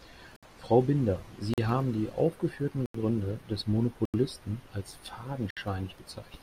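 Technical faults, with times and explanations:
0.36, 1.54, 2.86, 4.05 and 5.50 s: block of digital silence. The speech drops abruptly to silence for about 43 to 85 ms each time. Three of the gaps fit output buffers of 2048 and 4096 samples at 48 kHz not being filled in time.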